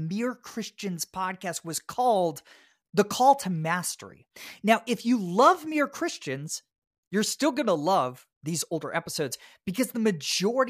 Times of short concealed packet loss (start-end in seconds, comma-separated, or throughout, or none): none